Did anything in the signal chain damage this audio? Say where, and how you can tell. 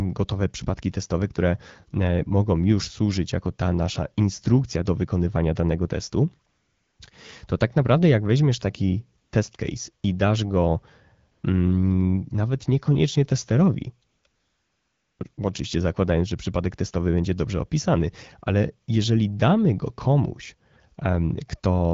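Yes. The damage comes from AMR comfort noise in the call's discontinuous-transmission stage. At 6.49–6.99, 9.21–9.31, 11.31–11.43 (after "case i dasz go"), 14.09–14.23, 14.27–15.19 and 15.33–15.37 s (before "oczywiście zakładając że przypadek"), the real background gives way to smooth synthetic noise. The sender stopped sending speech frames, and the receiver generated filler from a coarse level and spectrum description. On a spectrogram these gaps show as flat, featureless noise blocks with abrupt edges. On the waveform they appear as a steady, even floor that switches in and out.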